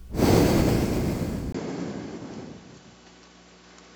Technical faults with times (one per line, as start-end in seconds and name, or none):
1.52-3.96 input switched to a poorer device